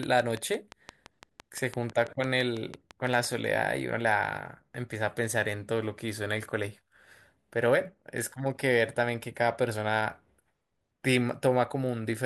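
From 0.03 to 3.26 s, a steady ticking at 5.9 clicks per second, around twenty pulses peaking about 10 dB above the speech: a train of clicks, likely from electrical interference.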